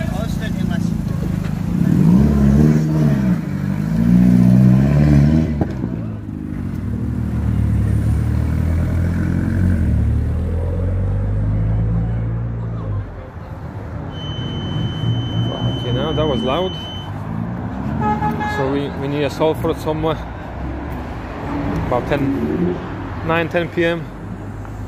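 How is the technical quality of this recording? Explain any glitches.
The recording has one clear fault, a feedback whistle from 14.07 to 17.13 s. The loudspeaker-to-microphone loop was likely sitting just at the edge of feedback, so a single frequency around 3 kHz kept recirculating without building into a full howl. What you hear is a thin, steady tone riding behind the sound, roughly 15 dB below it and swelling and fading slowly in level, which stops at 17.13 s.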